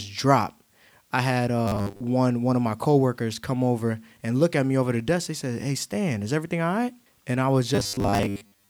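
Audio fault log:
1.68–2.02 s and 7.75–8.69 s, robotic sound from repeated short buffers: after "dropped I had" and "I was", most of the speech becomes a rigid metallic 100 Hz buzz, likely a 10 ms chunk replayed while real audio is skipped; spectrogram shows fixed harmonics every 100 Hz, waveform a repeating 10 ms pattern.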